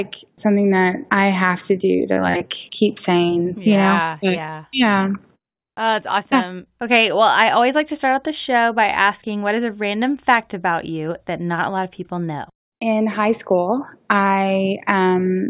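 No technical faults are audible.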